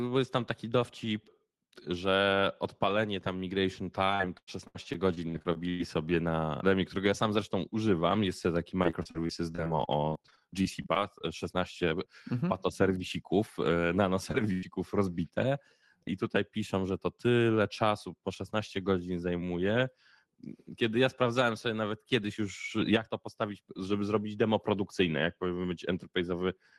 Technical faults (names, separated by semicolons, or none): repeated packet loss (robotic sound); short concealed packet loss; burst of packet loss